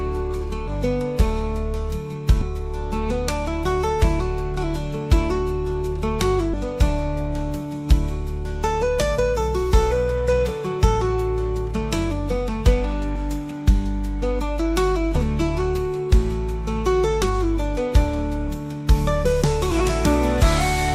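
Compressed frames skipped at 0.67–0.70, 2.41, 6.53–6.55, 13.15–13.18, 15.15–15.18 and 19.71–19.74 s. Whole frames never play, so the audio leaps ahead, from about 70 ms up to half a second. Jumps fit 20 ms frames.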